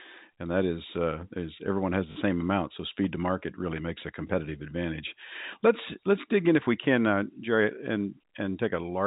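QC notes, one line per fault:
2.12–2.16 s, packet loss with last packet repeated: right after "is everyone has the", about 40 ms drops out (fits two 20 ms packets) and the last chunk replays until "same amount" picks up. The repeats give a quick robotic stutter within the 4 kHz telephone band of the G.711 line.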